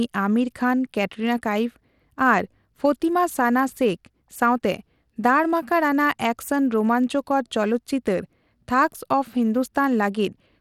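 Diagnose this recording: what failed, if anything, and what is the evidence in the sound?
The failure sits at the codec stage, across the whole recording. The speech has a gritty, grainy edge from start to finish, and the codec damage is plainly audible. Nothing comes through above 17.4 kHz. Sibilants sound rough and unstable. The likely cause is Bluetooth SBC compression at a small bit pool, which fits a rate around 96 kbps. Too few bits reach the upper sub-bands, so the top is cut and coarse quantisation adds grit and aliasing.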